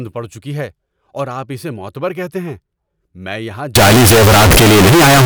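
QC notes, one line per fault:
3.75–5.26 s, float read as integer: right after "میں یہاں" the sound turns very loud and harsh, squared off at a nearly fixed high level, with background noise as loud as the speech, though pitch stays traceable. Likely 32-bit float samples read as 32-bit integers, letting sign and exponent bits set each value.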